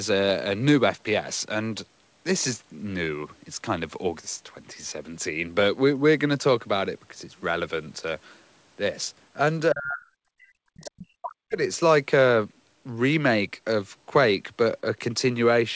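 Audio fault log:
9.73–10.07 s and 10.35–11.62 s, speech suppressed in double talk: the echo canceller likely faced both ends talking at once. Unable to tell the local talker apart from the loudspeaker echo, it clamped down on the whole signal. The speech drops by about 35 dB in the first stretch and about 40 dB in the second, with a brief gap between them. It comes back afterward, still within the band that ends at 8 kHz on this call path.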